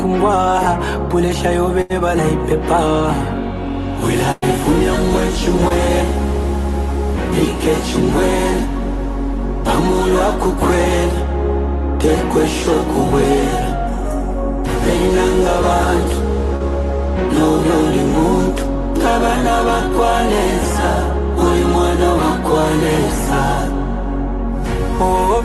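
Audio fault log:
1.81 to 1.92 s and 4.32 to 4.44 s, burst of packet loss: the sound freezes into a held tone or hiss that fades away, then jumps ahead. The jump skips about 80 ms in the first burst and about 100 ms in the second. Several packets in a row arrived too late or not at all, so the receiver extended the last audio while lowering its level. Playback then resumed past the lost stretch.
5.68 to 5.72 s and 16.56 to 16.62 s, short concealed packet loss: each spot gives a brief smear or wobble, about 20 ms at the first and about 40 ms at the second, and a quick transient may drop out. A little audio failed to reach the decoder in time. The receiver covered the hole by continuing the preceding sound, pitched or noise-like, and then blended back into the real signal. The underlying call codec's band limit near 12 kHz stays in place across these repairs.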